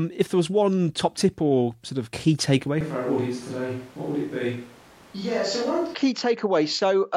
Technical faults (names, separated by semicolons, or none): switch to a distant microphone